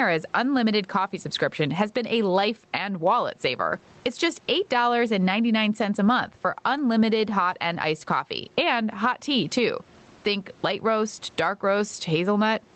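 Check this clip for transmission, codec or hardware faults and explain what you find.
One fault runs through the whole clip. Gain pumping, present throughout: the level is likely set far too high, so a fast limiter clamps down on each loud sound. The gain swings by around 15 dB, leaving the sound squashed, with the faint room noise about 41 dB below the speech.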